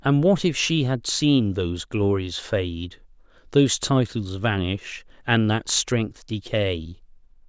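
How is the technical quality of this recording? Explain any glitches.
No technical faults or glitches are audible anywhere here.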